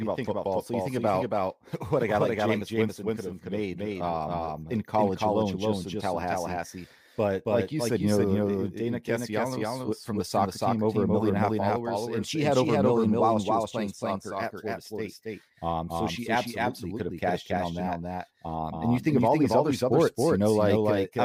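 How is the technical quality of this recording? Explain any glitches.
The speech carries a doubled audio track from start to finish. A second full-band copy, about as loud as the original, trails by roughly a third of a second. It has no decay or room colour. The likely cause is a second, slower capture path mixed back in.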